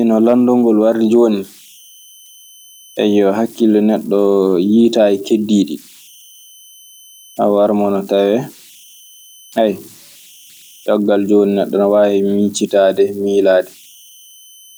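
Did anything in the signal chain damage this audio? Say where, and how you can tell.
Yes, at the converter. Converter idle tones run through the whole speech clip. A faint whistle around 3 kHz sits in the pauses, about 31 dB below the signal. Grainy noise hangs under the quiet passages. An undithered delta-sigma converter settles into repeating bit patterns on small inputs, and those patterns produce the tone.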